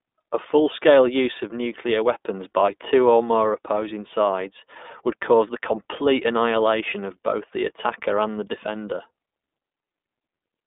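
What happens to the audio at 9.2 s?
At 9.2 s the speech carries the same iLBC codec damage that runs through the whole clip. Each 20 ms frame's excitation is coded on its own, without reference to the previous frame. The result is a plainly audible rough, slightly synthetic texture, and the coarseness fits a rate near 15.2 kbps. The line band spans 250 Hz to 3.6 kHz, and nothing passes above 3.8 kHz, so the sound is dull and narrowband.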